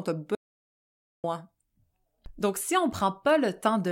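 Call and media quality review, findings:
Audio dropout to silence, 0.35 to 1.24 s. Speech cuts off abruptly, about 0.89 s of silence, no room tone, then resumes mid-flow. Content in gap unrecoverable. Likely cause: input path lost upstream (device disconnect, link failure or stray mute) while recorder or encoder kept writing silence.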